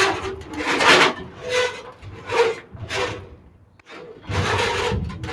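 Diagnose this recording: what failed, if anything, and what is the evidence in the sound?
Call processing failed: a speech noise suppressor was applied to these sounds. It treats steady parts as noise, so the level pumps by around 10 dB.

Sound is cut by the noise suppressor at 1.21–1.44, 1.76–2.29, 2.56–2.86 and 3.17–3.89 s. Held sound sinks there by about 7 to 8 dB.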